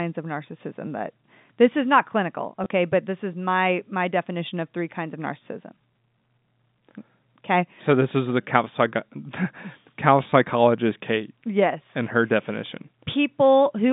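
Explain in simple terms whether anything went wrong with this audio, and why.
Packet loss with last packet repeated struck twice, at 2.64 to 2.66 s and 10.3 to 10.32 s. Each time, a scrap of sound replays, causing a tiny stutter.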